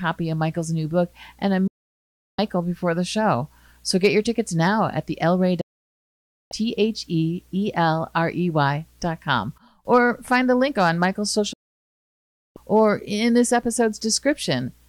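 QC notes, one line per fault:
1.67–2.39 s, 5.61–6.52 s and 11.53–12.57 s: digital broadcast dropout. The receiver stopped getting decodable frames and muted its output until clean frames arrived again. Each time, the sound fades out over about 8 ms, a drop quick enough to sound like a cut, and stays silent for roughly 0.7 s, 0.9 s and then just over 1 s. The gaps fit whole runs of lost frames of about 32 ms each. The audio resumes further along, and everything broadcast during the gaps is lost.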